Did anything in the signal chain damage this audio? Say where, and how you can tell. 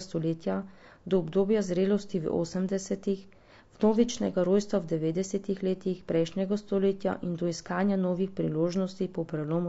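Yes. Plainly audible codec damage runs through the whole speech clip, likely from low-delay AAC compression at a rate that fits about 32 kbps. Too few bits for the frequency lines of each frame leave grainy noise between the harmonics and a thin, synthetic top band, unlike packet loss, which comes and goes.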